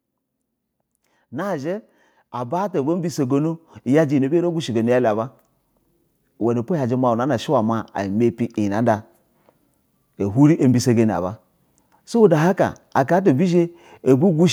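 An automatic gain control in the recording chain judged the incoming speech too quiet and pushed its gain upward, climbing by about 12 dB between 1.3 and 5.37 s. This is automatic gain rising: because the boost acts on the whole signal, the voice and the background noise behind it swell together over those four seconds.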